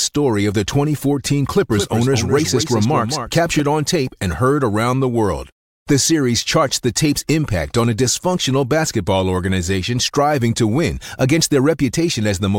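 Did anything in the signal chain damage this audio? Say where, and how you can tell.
Yes: a doubled audio track, 1.72 to 3.60 s, before "on tape and heard". A dry copy about 5 dB down lags roughly 200 ms, likely from a slower second capture path.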